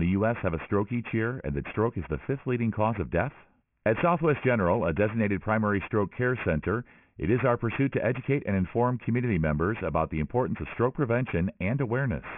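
Aliasing runs through the whole speech clip. The audio was resampled to a much lower rate without an anti-alias filter first, and the band edge at 3 kHz fits a 6 kHz rate. Energy that sat above 3 kHz folds back below it as tones unrelated to the speech, roughly 15 dB under the signal. Sibilants turn gritty and metallic, and the spectrum stays dense right up to the 3 kHz edge instead of rolling off.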